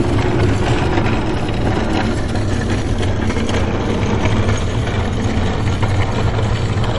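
From start to finish, the audio carries plainly audible MP3 compression damage. Nothing sounds above 11.2 kHz. The treble is cut off flat, as most encoders do at a fixed frequency. Weak frequency lines drop in and out between frames, which gives a watery, swirling texture and smears sharp attacks. The damage is likely from a low bitrate, and it fits a setting around 48 kbps.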